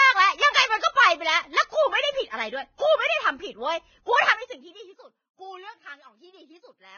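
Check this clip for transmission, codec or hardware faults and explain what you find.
Three faults are audible in this speech clip: codec damage throughout, one pre-echo, and zipper noise during a level drop.

Throughout, the audio is heavily degraded, with nothing above 6.5 kHz and a hissy, grainy treble. This is likely Vorbis compression at a very low rate, around 16.6 kbps. At that rate the encoder lowers its cut-off and quantises the remaining high band so coarsely that fine detail turns into noise.

From 2.75 to 2.79 s, a pre-echo of about 42 ms precedes a sharp onset. The transform block's quantisation noise, scaled for the loud attack, spreads back into the quieter moment before it, so a short hiss leads into a softened, smeared attack.

From 4.23 to 4.95 s, zipper noise rides on the audio while the level falls by roughly 15 dB. The gain moves in 1 dB steps, about twenty per second, with no smoothing between them. 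Each step leaves a small click, and together they form an audible ticking.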